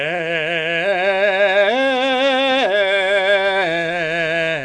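From start to finish the music carries a rough, hissy halo and a smeared, underwater blur, most likely Nellymoser compression at a rate that fits about 44 kbps. Quiet bands starved of bits return as noise, and a spectrogram shows blotchy, granular fill with nothing above 10.6 kHz.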